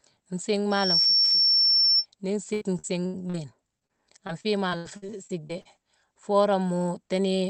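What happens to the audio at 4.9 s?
At 4.9 s you're in the middle of a burst of repeated packet loss (robotic sound) running from 4.27 to 5.67 s. Nine holes, the longest about 76 ms, get patched by stretching the last bit of sound, so it turns choppy with chunks missing.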